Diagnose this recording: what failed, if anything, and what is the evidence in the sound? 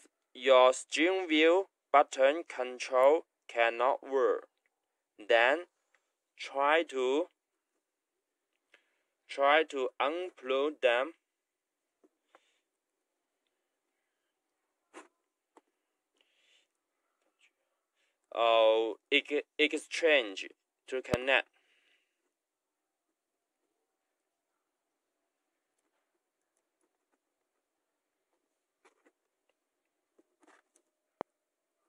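Loud pops at 21.14 s and 31.21 s, each a single sharp transient well above the signal, which continues beneath; likely an electrical step from a plug, switch or static in the analogue wiring.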